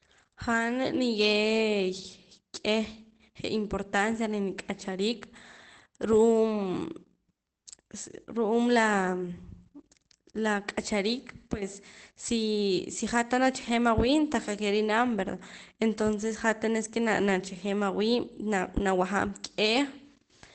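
A speech recording with one brief patch of roughness at 10.69 s, where about 20 ms of sound turns grainy and noisy but never drops out. This is a lost packet rebuilt from error correction. The timing points to a single missing packet on the Opus call path. The packet that followed carried a low-bitrate backup copy of it, and the decoder played that coarser copy to fill the slot, so the gap is covered by a short stretch of lower-quality sound.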